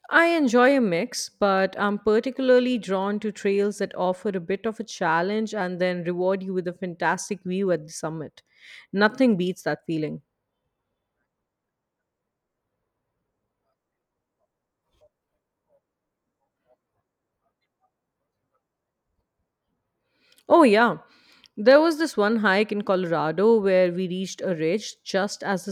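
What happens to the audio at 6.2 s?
At 6.2 s the speech carries clock slip clicks, a fault running from about 0.14 s to 25.70 s. The likely cause is two devices on unsynchronised clocks, off by roughly 500 ppm, so a single sample is dropped or repeated about every 40 ms. That comes out as a soft, even rattle of about 25 ticks a second under the voice, fading in pauses. Its strict regularity and lack of gaps set it apart from buffer dropouts.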